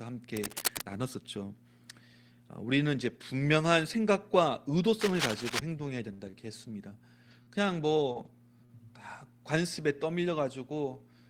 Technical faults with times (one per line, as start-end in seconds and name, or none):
0.35-0.82 cable scratch noise
5.00-5.59 cable scratch noise
6.13-7.49 repeated packet loss (robotic sound)
8.09-8.27 lost packet rebuilt from error correction
8.13-8.17 short concealed packet loss
8.65-8.71 short concealed packet loss